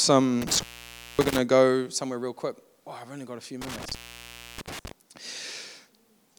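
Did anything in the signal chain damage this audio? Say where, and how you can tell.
Yes, in the analogue wiring: an intermittent contact. From 0.42 to 1.38 s, just before "to go somewhere real", and again from 3.6 to 4.9 s, the speech cuts out for about 0.56 s and 0.64 s, with crackle at the edges and faint hiss in the gaps. A loose plug or cable is briefly opening the line.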